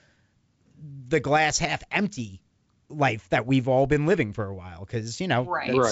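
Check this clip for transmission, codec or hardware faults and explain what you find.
I find no transmission, codec or hardware faults in this clip.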